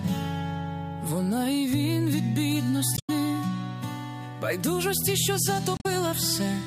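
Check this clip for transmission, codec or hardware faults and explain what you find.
Two faults were found, both caused by damaged data in a compressed stream. They occur from 2.94 to 3.10 s and from 5.75 to 5.86 s. Corrupted bytes make the decoder misread frames and lose sync. It then hunts for the next valid header. Each event sounds like a short squawk or blip.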